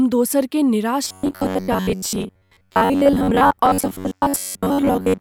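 From 1.04 s to the end, new audio likely arrived too seldom, so playback filled most of the gaps by looping a stretch of about 11 ms. This robotic sound from repeated short buffers lays a rigid, metallic 93.8 Hz buzz over the speech, which still loosely follows its contour.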